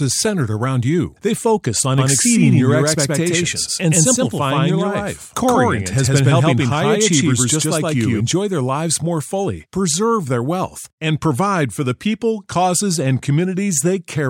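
From 1.98 s, right after "focus on", until 8.20 s, before "their lives more fully", the speech is heard twice, an equally loud full-band copy trailing by about a tenth of a second and cutting in and out abruptly. This doubled audio track likely comes from a second, slower capture path.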